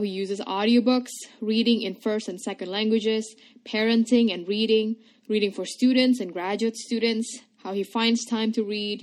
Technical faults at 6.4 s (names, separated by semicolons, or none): none